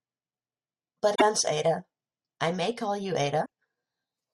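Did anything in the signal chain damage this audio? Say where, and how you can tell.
Yes, at the codec stage: damaged data in a compressed stream. Brief glitches cut through the speech from 1.12 to 1.22 s and from 3.42 to 3.46 s. Corrupted bytes made the decoder misread those frames and lose sync until it located the next valid frame header.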